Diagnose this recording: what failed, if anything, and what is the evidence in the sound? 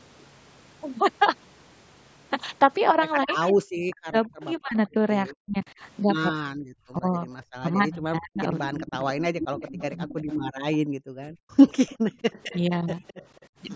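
Between 3.25 and 10.09 s the speech repeatedly dips and breaks into pieces, for about three seconds in total, with the deepest cuts around 40 dB down. A second, much smaller dip of about 5 dB, lasting only a few tens of milliseconds, falls between 12.69 and 13.71 s. This is speech suppressed in double talk, likely at the call-processing stage. The echo canceller could not tell this talker apart from loudspeaker echo while both sides spoke, so it attenuated both.

A delayed copy of one voice returns 213 ms behind the original, in three stretches. It runs at about 20 dB below the speech from 3.43 to 4.88 s, at about 10 dB below from 8.67 to 10.77 s, and at about 20 dB below again from 11.89 to 13.47 s. This is echo leak, likely at the call-processing stage. The loudspeaker side's echo canceller left part of what its microphone picked up, and that residue was sent back down the line.

From 10.79 to 11.56 s the room sound drops away, falling by as much as about 40 dB for roughly 0.7 s, then comes back. 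This is background gated by the echo canceller, at the call-processing stage. While the loudspeaker was playing, the canceller pulled the microphone down hard and released it once playback stopped. The call's microphone processing, which leaves nothing above 8 kHz, accounts for the band limit heard throughout the clip.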